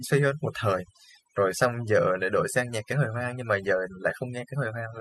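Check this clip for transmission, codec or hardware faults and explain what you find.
One fault runs through the whole speech clip. Overdone noise removal, present from start to finish: a noise reduction stage set far too aggressively pushes individual frequency bands down or out whenever they sit near its noise estimate, taking quieter speech detail with them. Pauses fall to near silence dotted with twinkling specks.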